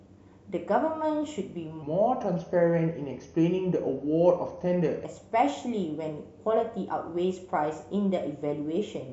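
Section at the wrong speed, 1.83 to 5.05 s: speech runs at 0.857 times normal, about three semitones deeper, likely from a mismatched playback clock.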